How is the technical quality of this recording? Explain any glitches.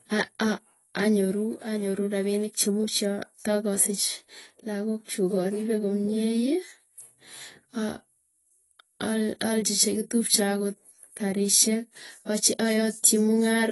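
The recording has one fault, present from start to finish: plainly audible AAC compression damage.

Throughout, the speech sounds dull and smeared, with nothing above 11.5 kHz and a warbling, fizzy texture on sibilants. The likely cause is AAC-LC coding at a low bitrate, consistent with about 32 kbps: the encoder lowers its cut-off and quantises coarsely, leaving spectral holes. That swirling texture distinguishes it from a simple low-pass filter, which would only roll off the top cleanly.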